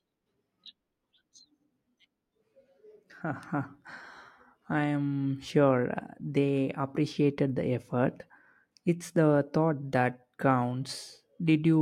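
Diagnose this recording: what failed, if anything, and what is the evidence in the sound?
Listening through the speech, nothing stood out that would point to a failure at any stage of the chain.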